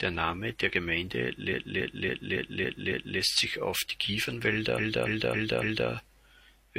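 Repeated frames stutter from 1.49 to 3.16 s before "sich auf die", and from 4.74 to 5.86 s: a 0.28 s block replays six, then four extra times, appearing as identical tiled waveform segments.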